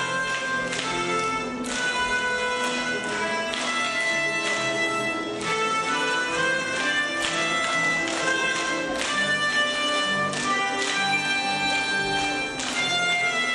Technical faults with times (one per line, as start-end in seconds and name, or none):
0.00-13.54 MP3 compression